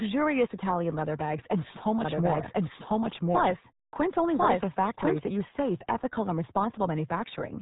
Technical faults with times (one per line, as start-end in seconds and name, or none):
0.00-7.62 RealAudio 14.4 codec